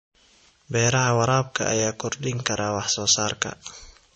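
An encoder short of bits, likely MP3 compression at a low bitrate in the region of 34 kbps, has thinned this speech clip throughout, cutting everything above 8.3 kHz and dropping weak frequency lines frame to frame, so the sound turns audibly watery and swirly, with dulled s sounds and smeared attacks.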